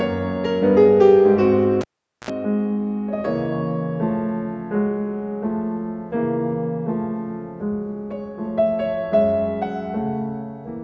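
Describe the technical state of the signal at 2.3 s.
At 2.3 s the signal is just recovering from a cable pulled and plugged in (1.81 to 2.30 s): a pop, about 0.44 s of near-flat waveform, then a 58 ms 60 Hz mains buzz showing as harmonic stripes, and a final pop spike as sound returns.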